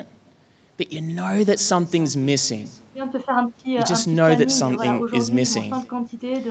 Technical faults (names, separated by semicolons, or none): echo with no canceller